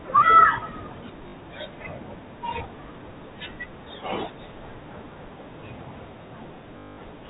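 At 1.28 s there's a short robotic stutter lasting about 60 ms, and a longer one at 6.78 s running for about 200 ms. Both are packet loss with the last packet repeated: packets went missing, so the receiver kept replaying the last good one until fresh audio arrived. The longer run buzzes at about 50 Hz, which fits 20 ms packets. It all comes through the narrow G.711 telephone band.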